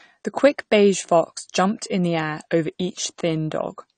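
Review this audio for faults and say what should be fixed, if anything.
Across the whole clip the speech sounds dull and smeared, with nothing above 9 kHz, and sibilants and held vowels carry a plainly audible warbling, fizzy texture. The likely cause is AAC compression, with the AAC-LC coder squeezed to a bitrate that fits about 32 kbps: to save bits it lowers its cut-off and coarsely quantises the remaining frequency lines, leaving gaps that turn sustained sounds watery. To prevent it, encode at a higher bitrate or keep an uncompressed master.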